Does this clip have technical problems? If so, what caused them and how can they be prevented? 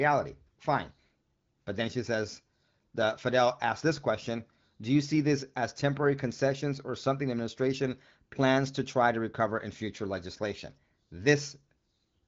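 No, the speech carries no faults, and its bandwidth stopping near 7.5 kHz with light coding texture fits an AMR wideband (HD Voice) path running at about 16 kbit/s, which calls for no prevention.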